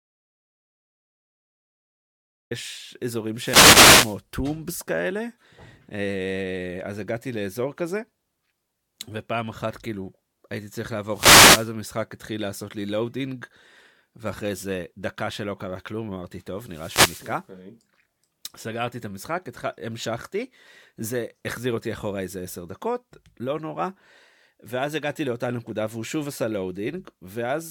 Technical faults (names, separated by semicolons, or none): audio dropout to silence; wireless microphone noise hit